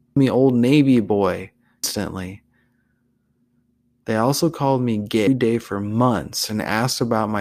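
At 0.16 s, 1.84 s and 5.27 s, just after "also called me", damaged data in the compressed stream makes the decoder misread corrupted frames, lose sync and search for the next frame header.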